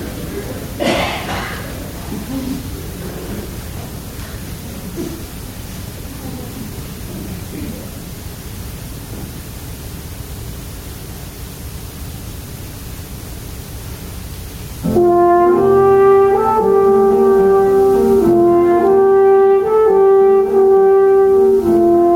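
Gain pumping runs through the whole clip: the gain swings by roughly 15 dB, squashing loud and soft parts together. Unlike a noise gate, the background never drops to silence. The likely cause is input gain set far too high, with a fast limiter clamping down.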